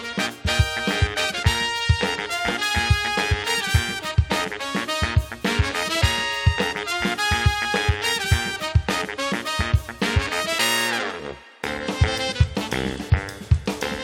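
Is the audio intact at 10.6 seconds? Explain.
Yes, at 10.6 seconds the audio plays through intact, with no dropout, click, distortion or other fault at that moment.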